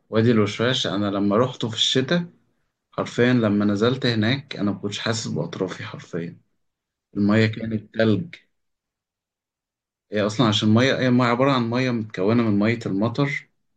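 No technical faults can be heard anywhere in the recording. There is nothing in the audio that needs a timestamp or a fault note.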